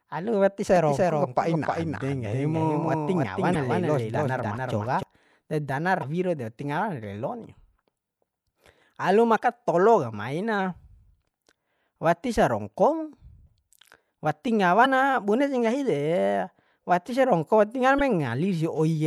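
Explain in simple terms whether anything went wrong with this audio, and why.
A few things went wrong here.

From 0.76 to 5.03 s there's a doubled audio track: the same speech plays twice, with a second, somewhat quieter copy trailing about a third of a second behind. It starts and stops abruptly, likely because the audio was picked up again through a slower path.

Between 1.26 and 2.53 s you get a drift correction step: playback slows by about 5.6% and the pitch drops a full semitone, then snaps back. That's likely clock-matching software changing speed in one jump to keep its buffer balanced.

Finally, there's damaged data in a compressed stream, heard as short glitches, each about 40 ms, at 3.52, 5.99, 9.35 (just before "tolo ka maina"), 14.82 (just before "ma bune sih nggahi") and 17.97 s. The decoder hit corrupted frames and searched for the next frame to find its place again.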